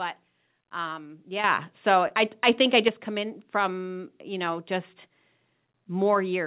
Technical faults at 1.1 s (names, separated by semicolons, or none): short concealed packet loss